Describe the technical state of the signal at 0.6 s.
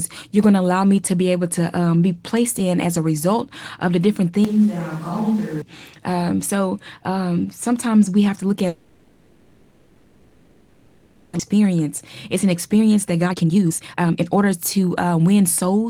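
At 0.6 s the speech signal is intact, with no audible fault at that moment.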